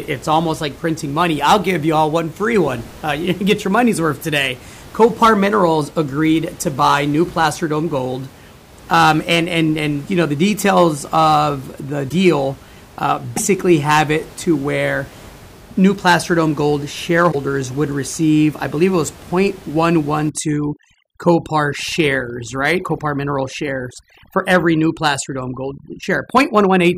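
At 12.08 to 12.13 s after "the details of the", at 13.36 to 13.39 s just before "have it to where", and at 17.31 to 17.35 s between "new placer dome gold" and "would receive I believe", the speech jumps ahead with a brief chirp or noisy gap about one to two 26.1 ms frames long. The likely cause is a broken MP3 bit reservoir: frames went missing, and the next frame pulled its borrowed data from the wrong bytes.

From 20.29 s to the end, the room noise, about 23 dB below the speech before this point, drops and breaks up into twinkling specks. This is overdone noise removal, which cuts bands close to the estimated noise floor hard enough to take quiet parts of the voice with them.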